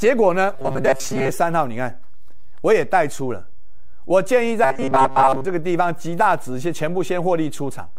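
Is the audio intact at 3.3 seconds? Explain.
Yes, the audio is intact at 3.3 seconds, with no fault heard at that moment.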